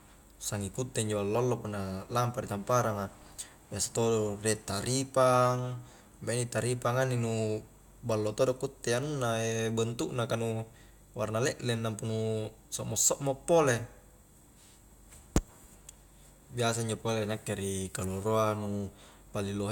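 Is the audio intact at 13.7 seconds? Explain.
Yes, at 13.7 seconds the audio is intact, with no dropout, click, distortion or other fault at that moment.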